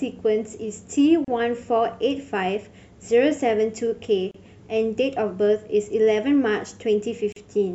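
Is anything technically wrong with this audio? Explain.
Yes. The speech has three gaps at joins of encoded pieces: about 34 ms at 1.25–1.28 s, 32 ms at 4.31–4.34 s, and 39 ms at 7.32–7.36 s. The segments were evidently encoded separately and butted together untrimmed, so each join keeps the encoder's leading delay and the padding of the previous piece's final frame. The result is a brief dropout in otherwise continuous sound, with edges smeared by the codec, after which the audio resumes where it left off.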